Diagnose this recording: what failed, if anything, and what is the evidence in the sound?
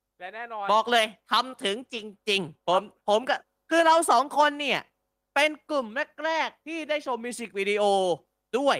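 No fault detected in this recording.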